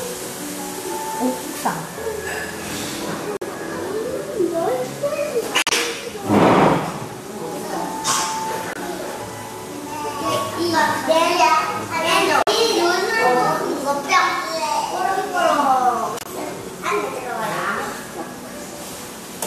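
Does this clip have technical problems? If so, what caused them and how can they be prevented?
Yes: corrupt frames muted. Short silent holes open abruptly at 3.37–3.44, 5.62–5.73, 8.69–8.77, 12.43–12.49 and 16.17–16.28 s. Damaged compressed frames were rejected by the decoder and replaced with silence, and the gap lengths suggest a few frames each time. Timing holds. Prevent it with error-checked storage or transport, or packet loss concealment instead of muting.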